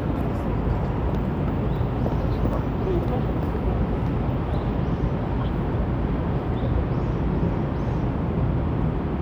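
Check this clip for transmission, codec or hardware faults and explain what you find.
One fault turns up, a single glitch. At 2.53 s there's a tiny jump forward, likely a dropped buffer (overrun): a millisecond or two went missing and the edges were butted together.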